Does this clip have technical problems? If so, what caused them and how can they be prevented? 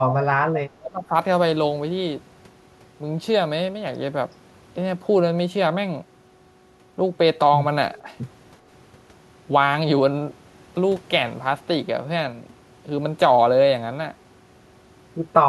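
Yes. Between 0.00 and 0.28 s and again from 0.82 to 1.13 s the speech dips sharply, by roughly 15 dB and then roughly 25 dB. This is likely speech suppressed in double talk: the echo canceller attenuated the near talker along with the echo. Better double-talk detection or a less aggressive suppressor would prevent it.

At 0.55 to 0.60 s a faint delayed copy of the speech appears, about 15 dB below the speech and 359 ms late. This is likely echo leak, where residual loudspeaker echo passed the far end's canceller. A headset or better far-end echo cancellation would prevent it.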